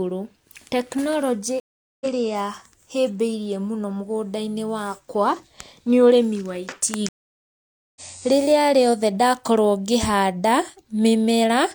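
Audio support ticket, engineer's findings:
Stream reconnect at 1.60–2.06 s (about 0.41 s silent) and 7.09–8.01 s (about 0.87 s silent). Network/player: link drops, fresh decoder restarts mid-stream. Speech resumes later by roughly 0.2 s and 0.5 s, skipping material, unlike a plain dropout.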